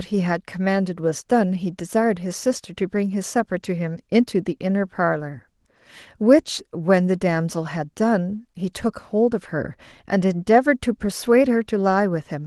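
No technical faults can be heard in the speech. The Opus voice compression leaves only a light coding texture and keeps the full bandwidth, which fits hybrid-mode coding at around 20 kbps.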